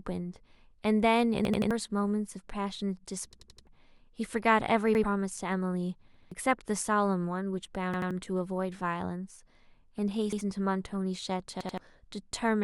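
Repeated buffer faults occur at 1.45, 3.33, 4.95, 6.14, 7.94, 10.33 and 11.61 s. Fresh audio arrived late, so the device replayed its last 85 ms block, which fits a 4096-sample buffer, one to four times. The result is hard-edged stutters in the speech.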